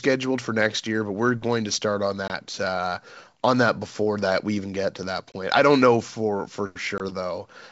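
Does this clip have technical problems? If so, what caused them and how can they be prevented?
Yes: packet loss on an ADPCM call, at 2.28 to 2.31 s, at 5.32 s and at 6.98 to 7.01 s, each hole about 20 ms, roughly a single packet. Unlike a plain dropout, each silence ends with slightly distorted speech while the decoder's predictor and step size resynchronise. Packet loss concealment and jitter buffering would prevent it.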